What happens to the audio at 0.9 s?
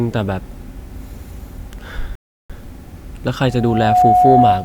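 At 0.9 s the speech plays through intact, with no dropout, click or other fault at that moment.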